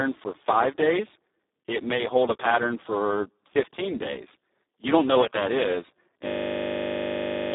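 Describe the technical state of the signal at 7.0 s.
At 7.0 s a system hang loop is running, from 6.26 s to 7.54 s after "know what that is": one 20 ms buffer repeats exactly, giving a steady 50 Hz buzz. Underneath, the Speex codec damage persists: hoarse, noisy speech limited to about 200 Hz to 3.7 kHz, consistent with a bitrate near 4 kbps.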